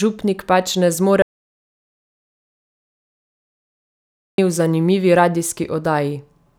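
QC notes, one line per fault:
1.22–4.38 s, audio dropout to silence: the speech cuts off abruptly mid-flow and the signal falls to silence for about 3.16 s, with no room tone or noise floor, before resuming just as abruptly. This likely comes from the input being lost, through a disconnected device, broken link or stray mute, while recording carried on writing silence. The waveform shows a flat line across the gap, and the spectrogram shows a fully black band spanning all frequencies.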